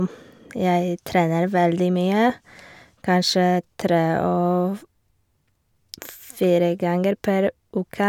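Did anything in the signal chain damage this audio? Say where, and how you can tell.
No, nothing along the chain seems to have touched this speech recording; every stage from capture to playback seems to have left it alone.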